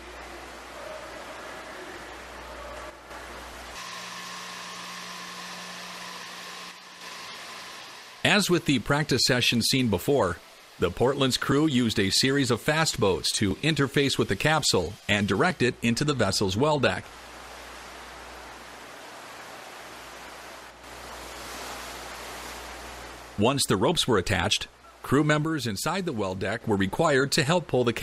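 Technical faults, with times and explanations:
2.90–3.11 s, 6.71–7.01 s and 25.44–26.61 s, one channel drops out: the level sags by about 6 dB. That's likely one channel going missing, so the mono sum halves in amplitude for a moment.
13.51 s, overlap between stream segments: a tiny skip where a sliver of audio goes missing and the waveform jumps. Two segment timestamps overlapped and the player trimmed that overlap from sound that wasn't actually doubled, which fits a stream cut into 2-second segments.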